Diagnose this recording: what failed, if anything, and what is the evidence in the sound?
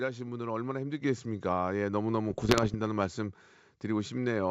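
At 1.02 s the speech and the background noise jump up together by about 5 dB in a single step and stay there. This is a microphone volume step-up in call processing: the automatic level control judged the input too quiet and raised the device's input gain at once.

From 2.30 to 2.76 s the wideband G.722 sound breaks into pops and rough bursts with brief level swings. These are bit errors on an ADPCM link, at a rate of around one percent. Each flipped bit also disturbs the decoder's step size and predictor, so the damage rings on for a few milliseconds after every error.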